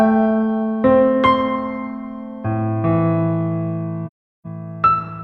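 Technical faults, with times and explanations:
4.06–4.46 s, AAC frame loss with muting: the sound fades into silence for about 0.38 s and then fades back in. The decoder lost a run of consecutive frames, which fits roughly nine frames, and filled them with a zeroed spectrum. The overlapping transform windows taper each edge over about one frame. Unlike a hard dropout, the hole has soft edges rather than an abrupt cut. Unlike concealment, nothing is repeated or smeared into the gap.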